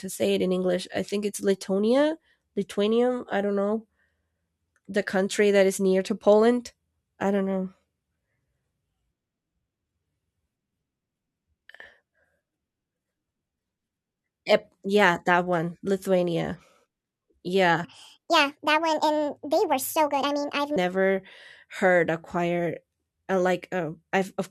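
From 17.84 s to 20.76 s the speech runs as a section at the wrong speed: it plays back at 1.6 times its recorded rate, so the talker sounds hurried and chipmunk-like, with pitch lifted by about seven semitones. Speed and pitch shift together and snap back at 20.76 s, which points to a segment that was likely resampled or clocked at the wrong rate during editing or playback, rather than a deliberate time-stretch.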